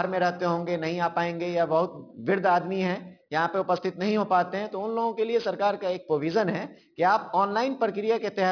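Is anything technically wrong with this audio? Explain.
Yes: there is aliasing across the whole clip. The sound was taken down from 48 kHz to 11 kHz without an adequate low-pass filter before the rate change, so everything above the new limit of 5.5 kHz folded back into the band as mirror-image frequencies unrelated to the original. The folded energy sits roughly 20 dB below the signal, giving sibilant and bright content a gritty, metallic edge, and the spectrum stays full right up to the 5.5 kHz cut-off.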